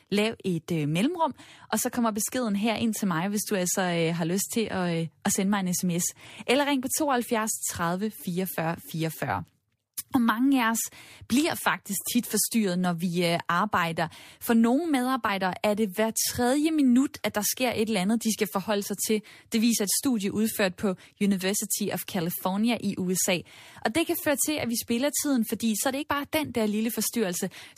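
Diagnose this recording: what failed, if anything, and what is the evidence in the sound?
Compressed frames were skipped at the codec stage, around 26.01 to 26.04 s: the speech jumps forward by about 50 ms, a couple of frames' worth, lost or rejected as damaged at decode.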